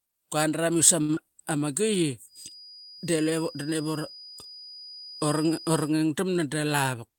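Speech, with four transport and acoustic faults. A packet arrived late at 1.01 s, draining the jitter buffer, so the receiver stretched the last sound for about 73 ms until 1.11 s. That is a short stall from a late packet: nothing is lost, but a sound is held too long. At 1.15 to 1.19 s about 40 ms never arrived. The decoder extended the preceding sound for about 19 ms and blended back, with the delay shrinking by roughly 20 ms. This short concealed packet loss is heard as a brief smear. From 2.25 s to 5.96 s a loudspeaker-to-microphone loop likely sits right at the edge of feedback, leaving a thin, steady 4.9 kHz feedback whistle about 20 dB below the speech and swelling and fading slowly in level. From 6.44 s to 7.16 s the receiver cut roughly 70 ms of excess buffered audio in small pitch-period pieces. This jitter buffer speed-up makes speech run at 108% speed at unchanged pitch, sounding hurried.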